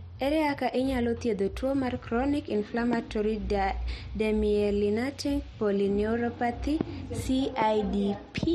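Loud pops hit this speech clip at 2.93–2.95 s, 6.81–6.83 s and 7.62–7.64 s, each a single sharp burst peaking roughly 15 dB above the speech, while the talking carries on beneath it. Each is most likely a sudden voltage step or pulse, from a plug, switch, static discharge or driver glitch, that was added to the signal and then shaped by the downstream circuitry into a brief pop.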